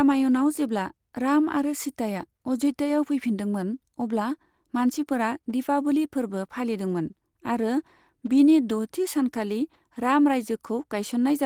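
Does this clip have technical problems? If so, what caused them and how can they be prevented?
No technical faults are audible.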